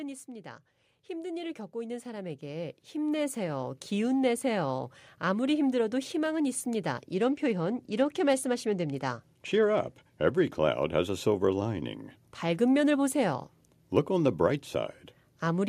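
A speech clip with two faults. From 0.25 to 4.98 s there is automatic gain rising. The level climbs by about 13 dB. Voice and background swell together. The gain control judged the input too quiet and raised it slowly. It settles just before "아무리 힘들어도 희망은 있습니다". A Bluetooth SBC bit pool drop follows from 7.14 to 10.43 s, between that phrase and "cloud has a silver". The treble dulls and gritty noise rises. A congested link forced fewer bits per frame. The top sub-bands lost detail. This points to the bit pool falling from 28 to 13, near 102 kbps.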